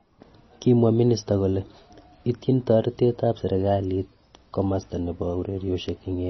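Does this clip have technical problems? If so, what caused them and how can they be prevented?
Yes. Heavy MP3 compression is heard throughout the speech: watery, swirling artefacts and nothing above 5.9 kHz, which fits a low bitrate of about 24 kbps. The likely cause is that starved encoder zeroing weak frequency lines and cutting the treble. Encoding at a higher bitrate, or keeping a lossless copy, prevents this.

Bit error spikes occur at 3.09 s and 5.89 s as sharp, broadband ticks unrelated to the sound. The first fits one flipped sample, the second a short run of about three. Each jumps by a power of two and snaps back. Checksummed storage and error-detecting digital links prevent this.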